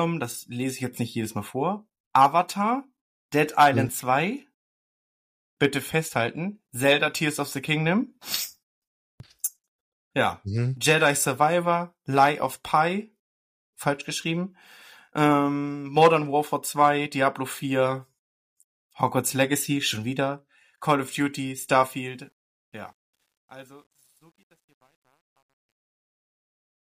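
Truncation distortion on a fade runs from 21.93 s to the end at 26.98 s, during the fade-out that begins around 22 s. The gain stage drops the low-order bits without adding dither, and the grain fits a word length of about 10 bits. As the speech level sinks toward the smallest step, the waveform collapses into coarse square steps. From 23.06 s onward the tail turns gritty.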